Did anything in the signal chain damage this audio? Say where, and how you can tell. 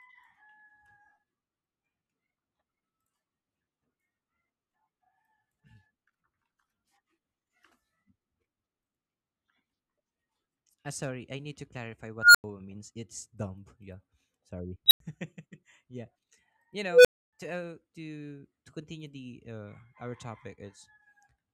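Yes. Something in the processing stage has an unstable filter. Right after "I need to clarify", at 12.17 to 12.44 s, a tone around 1.5 kHz swells over about 175 ms, clips, then drops to 93 ms of silence. It happens again at 14.86 to 15.00 s (about 4 kHz, 49 ms rise, 93 ms gap) and at 16.91 to 17.33 s (about 500 Hz, 143 ms rise, 279 ms gap). A recursive filter with bad coefficients is feeding on itself until the numbers overflow and it resets.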